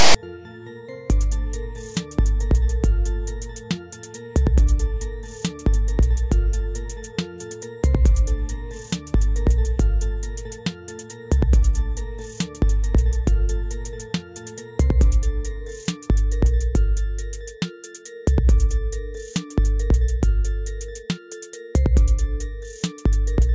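At the very start, from 0.00 to 0.15 s, a block of text metadata at the head of the file was handed to the decoder as if it were sample data, so file tags are played as audio. The character bytes, read as sample values, cluster in a narrow positive range, producing a loud, harsh rasp pushed off-centre to one side. It lasts about 145 ms, cutting in at full strength at the start and stopping abruptly as the real audio begins.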